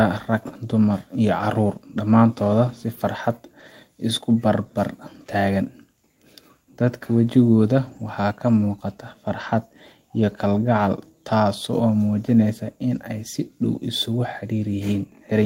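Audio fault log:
7.87–8.01 s and 12.95 s, lost packet rebuilt from error correction. There is no gap at either point. The first stretch lasts about 80 ms and turns rough and noisy, which fits four lost 20 ms packets in a row. The second is a single 20 ms blip of the same roughness. Each lost packet was replaced by a low-bitrate copy carried in the next packet. The decoder played those coarser copies in place of the originals.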